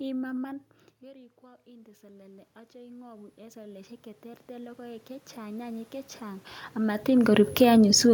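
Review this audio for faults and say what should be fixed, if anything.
From 1.02 s to 6.51 s there is automatic gain rising. Shortly after the talker moves away from the microphone, around 0.5 s, the level at the input drops by about 19 dB. The automatic gain control responds slowly, lifting its gain by about 19 dB over more than five seconds. Voice and room noise swell together throughout, so the background audibly climbs with the speech until the talker moves again, near 6.5 s. To prevent this, cap the maximum AGC gain.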